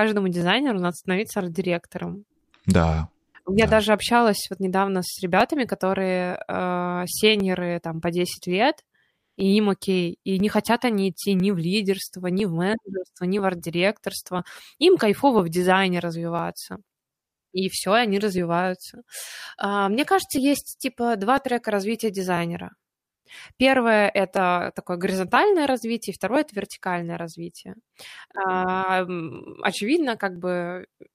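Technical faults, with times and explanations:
0.41–30.36 s, clock drift buffer slips: a click every 1.0 s, likely two clocks about 700 ppm apart forcing a few dozen samples to drop or repeat.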